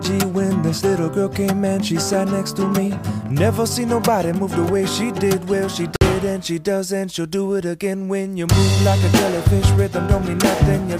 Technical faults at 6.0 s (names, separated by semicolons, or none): Bluetooth stall